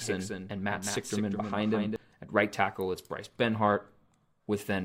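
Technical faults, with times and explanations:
0.00 to 1.96 s, doubled audio track: a second, slower capture path or an edit holding two copies out of step has likely mixed the speech in twice. From the very start a full-band copy trails the original by about a fifth of a second, a few decibels quieter, so every syllable is followed by a flat, dry repeat with no room tail. The copy cuts off abruptly at 1.96 s, leaving a single clean track.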